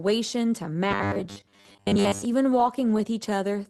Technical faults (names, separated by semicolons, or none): robotic sound from repeated short buffers; lost packet rebuilt from error correction